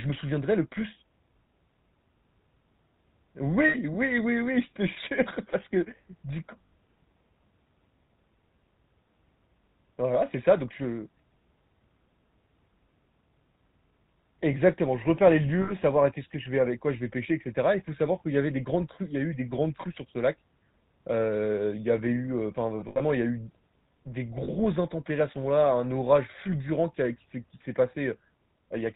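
A buzzy, gravelly roughness with nothing above 4 kHz runs through the whole speech clip, the damage of the GSM full-rate codec at 13 kbps, rebuilding the voice from sparse pulses. Brief rough, metallic rings at 3.68, 6.66, 15.62 and 24.44 s, plus a scattered cluster from 22.8 to 23.01 s, are lost GSM frames, each gap filled by repeating the last good frame.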